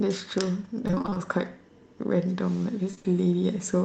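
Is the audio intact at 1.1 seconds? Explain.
No. At 1.1 s the speech sounds choppy and robotic, with small pieces missing. This is repeated packet loss between 0.87 and 1.19 s: eight short gaps, none longer than 25 ms, each patched by extending the preceding sound, so about half that stretch is filled-in audio.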